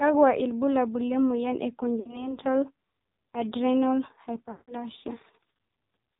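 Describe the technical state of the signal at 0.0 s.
At 0.0 s the speech has AMR narrowband mobile codec damage, throughout. Sampling at 8 kHz leaves nothing above 4 kHz, and a pulse-driven vocal-tract model rebuilds the voice. The heavy buzz fits roughly 5.9 kbps.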